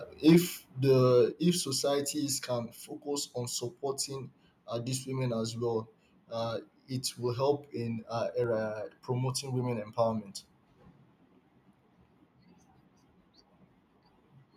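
Between 0.27 and 0.37 s the loudest peaks turn harsh and crackly. This is microphone overload, likely from an input gain set about 3 dB too high, so a small share of the peak tops are flattened at the converter's limit. Unlike codec distortion, the grit appears only on the loudest moments.

At 0.33 s, inside that burst, the microphone volume steps down by about 2 dB, and at 1.32 s it drops again by about 4 dB. The likely cause is the call software cutting the device's input gain after the distortion. Voice and background fall together in a single instant, with no gradual slope of the kind a compressor or fade would produce.

At 8.44 s a single sharp click marks dropped samples, likely a fraction of a millisecond missing from the stream, which makes the waveform jump. No sound is lost, which tells it apart from a dropout gap.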